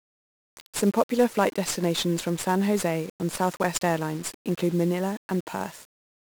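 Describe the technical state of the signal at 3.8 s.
At 3.8 s the speech carries heavy 1-bit DFPWM compression, present from start to end. Each sample keeps only a single up-or-down bit driving an adaptive level, so dense broadband quantisation noise makes everything fuzzy and crackly and buries the treble in hiss, consistent with a rate around 48 kbps.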